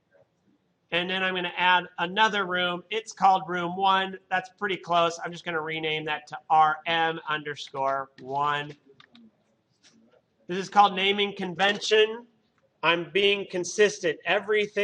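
No technical faults can be heard anywhere in this audio.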